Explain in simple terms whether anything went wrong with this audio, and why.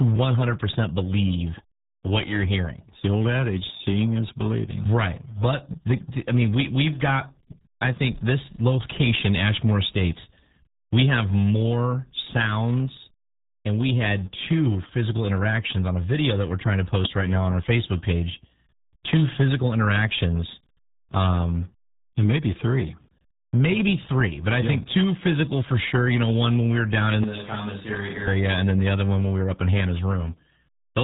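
Yes, two things went wrong. The whole recording passed through the RealAudio 14.4 codec, an old format built to squeeze speech down a dial-up modem line. It throws away everything above about 3.9 kHz and compresses the rest very heavily, so the speech sounds muffled and gargly from start to finish. Unlike a simple bad filter or a cheap microphone, which would only dull the sound, this adds a warbling, underwater quality because the codec is rebuilding the speech from crude approximations.

Second, from 27.24 s to 28.27 s, just after "we were down in" and until "and then the other", the speech suddenly sounds hollow and roomy, noticeably quieter, with more background noise and less body. The likely cause is a switch to a distant microphone, such as the camera's own, for about a second. Added echo or reverb would not do this: it would not drop the level and raise the room noise, and it would not snap on and off so abruptly.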